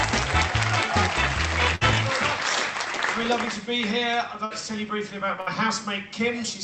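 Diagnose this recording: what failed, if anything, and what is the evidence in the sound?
The network stage dropped audio in a burst of packet loss three times, at 1.75 to 1.84 s, 4.45 to 4.53 s and 5.40 to 5.49 s. Each time roughly 60 ms of packets failed to arrive in time, so the receiver's concealment extended the last decoded sound for 54 to 60 ms, fading it, and playback resumed with that stretch of audio gone. The sound heard through the rest of the Opus call path, band-limited to 8 kHz, fits a 32 kbps setting.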